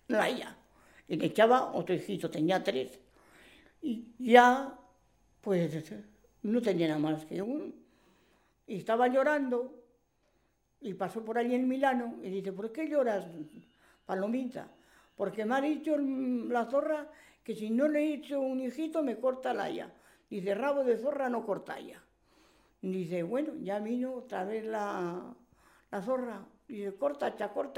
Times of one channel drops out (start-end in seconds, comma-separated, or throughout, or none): 7.43-27.78